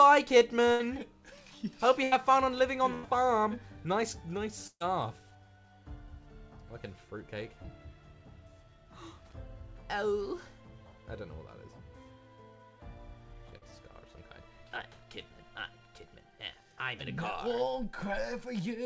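Audio that's been through a call link, with nothing above 8 kHz and coding noise consistent with G.722 at 64 kbps, and it has four bursts of packet loss early on: 0.72–0.81 s, 2.03–2.14 s, 2.94–3.05 s and 4.67–4.82 s. Each time the receiver stretches the last bit of sound and fades it, so you hear a held buzz or dying hiss where roughly 80, 80, 100 and 140 ms of real audio went missing. The last one runs out of concealment and drops to about 50 ms of dead silence before things pick up further along. Later there are two short concealed packet losses, at 7.62–7.66 s (about 20 ms gone) and 13.58–13.63 s (about 40 ms). They're just a quick smear or wobble where the decoder patched over the hole and blended back in, and a brief sound can simply disappear in there.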